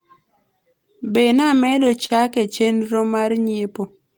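From 1.55 to 2.11 s the speech shows repeated stalls (stutter): packets arrived too slowly, so the jitter buffer emptied four times and each wait, the longest 32 ms, was bridged by continuing the last sound. Unlike packet-loss dropouts, nothing is missing; about 59 ms is inserted, so the speech drags and hiccups.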